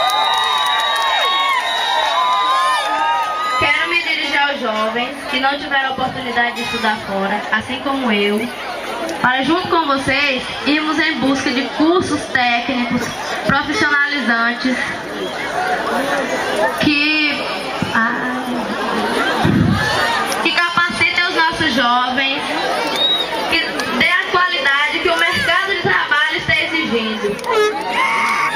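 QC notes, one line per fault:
13.89 s, compressed frames skipped. The audio jumps forward by roughly 20 ms. Whole compressed frames never reach the output, either because they are missing from the stream or because the decoder rejected them as damaged. The missing stretch fits one frame's length or a small multiple of it. The result is a brief glitch at the join, with the sound resuming slightly further along.
18.45 s, corrupt frame decoded. A short burst of wrong-sounding energy peaks at about -20 dBFS. Flipped bits inside the compressed data were played through without being caught. Misread gains and codes put energy at the wrong frequencies. The damage seems to span a few consecutive frames, so the blip is brief.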